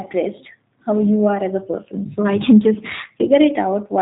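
Throughout, G.729 codec damage is plainly audible: rough, synthetic speech rebuilt from sparse pulses, fitting an 8 kbit/s stream, with a spectrogram empty above 4 kHz.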